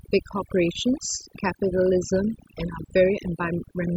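Overdone noise removal runs throughout. Aggressive noise reduction strips quiet frequency bands, leaving near silence with twinkling specks.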